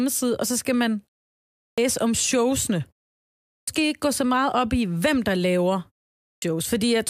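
Speech resumes abruptly after three short pauses, at 1.61, 3.50 and 6.22 s, each time losing about 170 to 200 ms of its onset: a clipped start after a pause, where the output device sleeps during silence and wakes too late.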